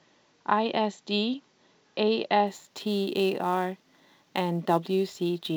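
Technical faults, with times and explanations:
2.47 s to the end, sample clock jitter: from here the converter's clock starts wobbling, on the order of 10 microseconds, so each sample lands a touch early or late. The error scales with how steeply the waveform is moving, so you hear a gritty hiss riding on the speech, strongest on loud passages and sibilants, sitting only about 25 dB under the signal, and it drops away in the pauses.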